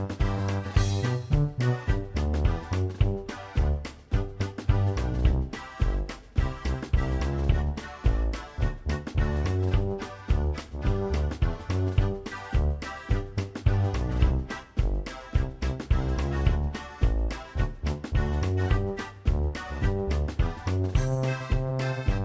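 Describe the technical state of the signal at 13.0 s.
At 13.0 s the signal is intact, with no audible fault at that point.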